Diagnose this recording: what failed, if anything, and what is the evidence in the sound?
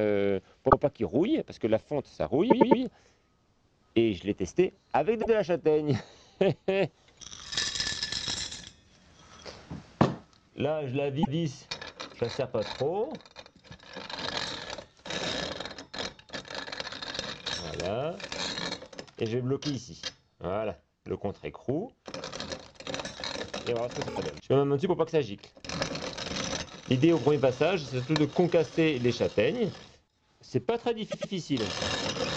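This is a case of repeated frames at the codec or storage stage. You can hear stutters at 0.69, 2.50, 5.21, 11.22, 24.07 and 31.10 s. The blocks run from 26.1 ms up to 156.7 ms, and they come in steps of about 26 ms, which fits compressed frames of that size. Some blocks replay several times: the 104.5 ms one at 2.50 s repeats three extra times, so the clip gains nearly 0.9 s in total.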